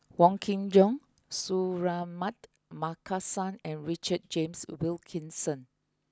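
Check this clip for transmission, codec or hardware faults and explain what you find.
One fault is present. At 1.41 s there is a sudden gain jump. A gain setting was likely applied instantly instead of ramped, so the speech and background noise drop together by about 6 dB and stay lower to the end.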